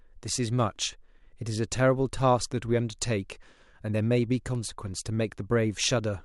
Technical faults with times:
none

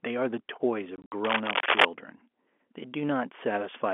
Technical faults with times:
0.96-1.12 packet loss filled with silence
1.24-1.86 cable scratch noise

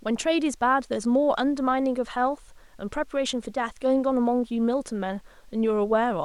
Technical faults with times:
none

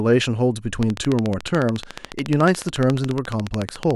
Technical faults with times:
0.83-3.96 train of clicks

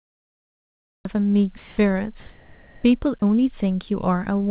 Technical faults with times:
0.00-1.05 cut-off start
1.58-1.78 sound dropped by the voice detector
2.20-2.84 sound dropped by the voice detector
3.20-3.22 sound dropped by the voice detector

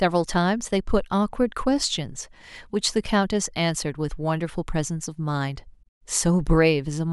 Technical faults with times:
none

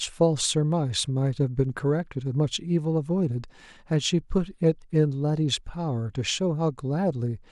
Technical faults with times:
none

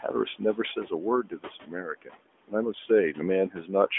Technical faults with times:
0.00-3.98 noise suppressor artifacts
1.23-2.20 speech cut by the noise suppressor
3.52-3.69 speech cut by the noise suppressor

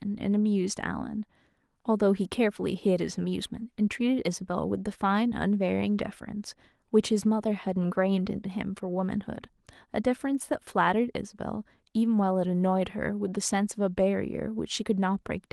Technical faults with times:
none

